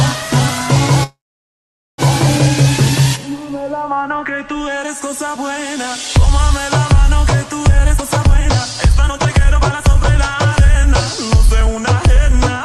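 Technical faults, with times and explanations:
1.03–2.01 s, call audio freeze: the sound stalls for about 0.95 s. The last fragment is briefly stretched into a fading buzz, then about 0.82 s of silence follows before the audio resumes exactly where it stopped, with nothing lost but everything after it now about 0.95 s later. The likely cause is delayed packets draining the jitter buffer. On a spectrogram, a short smeared continuation tails into a blank column. The waveform shows a decaying stretch, then a flat line.
7.94–9.88 s, jitter buffer speed-up: the audio plays at about 141% speed but keeps its original pitch, so it sounds hurried. Roughly 0.7 s is trimmed out as the receiver cuts repeated pitch-period-sized slivers to shrink an overfull buffer. On a spectrogram, the harmonic spacing stays the same while onsets and transitions crowd closer together in time. The waveform shows many tiny, nearly invisible splice points where cycles were dropped.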